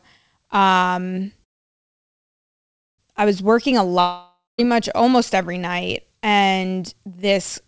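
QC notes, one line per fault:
1.44–3.00 s, call audio freeze: the sound stops and a fill of about 1.55 s follows, nearly all of it silence. It resumes at "I was" with nothing lost, so the audio is only delayed, likely because packets were held up and the jitter buffer ran empty.
4.00–4.60 s, long network dropout: a fill of about 0.58 s continues the last sound, then about 0.2 s of silence, and the audio returns at "much almost every night" with about 0.58 s missing, likely because packets never arrived and that stretch was lost.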